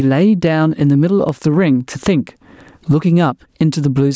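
Throughout the speech, the level swings by around 20 dB, squashing loud and quiet parts together. This gain pumping likely comes from excessive microphone gain, with a fast limiter clamping each peak.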